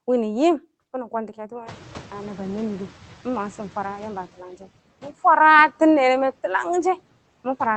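A speech clip with the noise suppressor catching up: room noise jumps by about 24 dB around one and a half seconds in, and from 1.66 to 4.26 s it passes through with less reduction before sinking by about 9 dB over 2.6 s. On a spectrogram, a broadband noise floor brightens, then fades gradually; the waveform's floor shrinks likewise. Content above about 8 kHz is absent throughout, which fits an Opus call codec at a modest bitrate.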